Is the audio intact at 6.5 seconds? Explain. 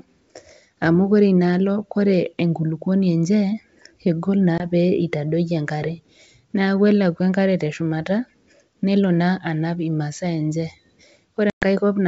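Yes, the speech at 6.5 seconds is intact, carried by G.722 wideband telephone coding at 64 kbit/s with no fault at that moment.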